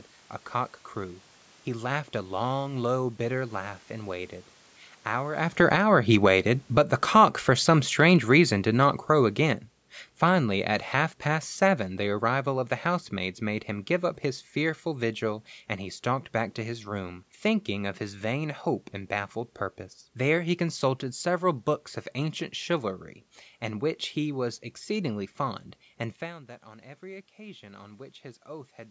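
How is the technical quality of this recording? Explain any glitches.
The recording has two automatic gain control faults, where the level of the whole signal drifts with the gain rather than with the talker.

From 5.42 to 15.14 s, ending just before "and he stalked back", there is automatic gain falling. The talker comes closer to the microphone at about 5.5 s, and the gain control reacts by pulling its gain down about 14 dB over roughly ten seconds. Voice and room noise sink together. On a waveform the envelope tapers steadily, and on a spectrogram the whole band, up to the 8 kHz ceiling of the call processing, dims at once.

From 26.21 to 28.8 s, after "was exceedingly fond and", there is automatic gain rising. The talker moves away around 26.0 s and the input drops about 17 dB, so the gain control slowly raises its gain about 4 dB. The voice and the background swell together. On a waveform the envelope widens gradually, and on a spectrogram the noise floor brightens along with the speech.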